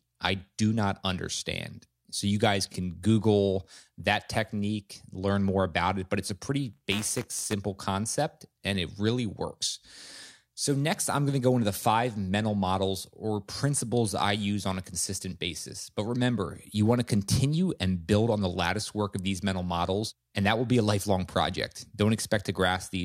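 From 6.73 to 7.53 s, buffer tearing gives the speech a 200 Hz robotic buzz. A small slice of each period replays audio about 15 ms old, with hard joins.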